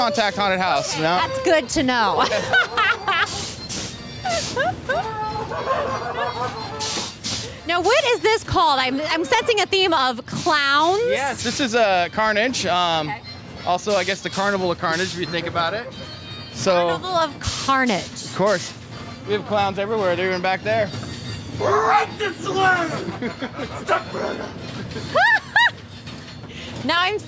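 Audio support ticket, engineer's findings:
No faults found on listening; no dropouts, distortion, timing or level anomalies to attribute to any component, so nothing to action on this ticket.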